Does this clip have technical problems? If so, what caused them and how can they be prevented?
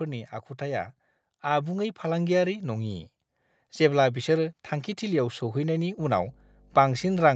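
Yes. Automatic gain rising: from 0.58 to 3.09 s the gain control creeps up about 6 dB, lifting speech and background together. Set a healthy input level or disable AGC.

Mains hum: from 5.98 s to the end there's a steady 50 Hz tone, roughly 15 dB under the speech, from a ground loop or nearby transformer. Fix grounding and keep cables away from power supplies.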